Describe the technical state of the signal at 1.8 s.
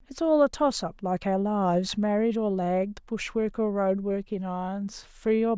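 The speech at 1.8 s comes through intact, with no audible fault in the signal at that point.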